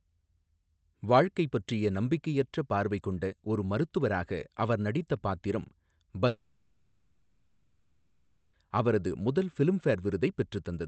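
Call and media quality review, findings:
Long network dropout, 6.27–8.55 s: sound breaks off after "மருத்துவராக அவர் நடித்த பாத்திரம்", replaced by a fading concealment buzz that settles to low noise, then resumes at "அவரது முதல்" with about 2.3 s lost. Likely cause: packet flow stalled, and the receiver's jitter buffer extrapolated the last frames across the gap.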